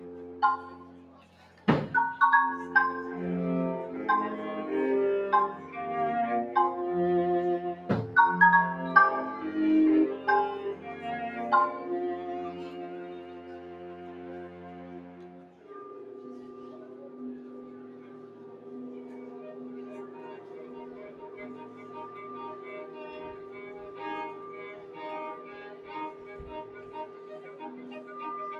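Throughout, sustained parts and tails keep sinking by around 10 dB while attacks pass, so the sound pumps and thins: a noise suppressor applied to music or sounds, mistaking steady content for noise.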